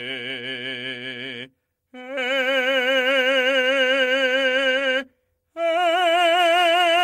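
From about 3.61 to 4.83 s the music hits repeated stalls, a stutter: packets came in late, the jitter buffer kept running dry, and the receiver stretched the last sound over nine short gaps of up to 20 ms each. Nothing's lost, it just hiccups and drags.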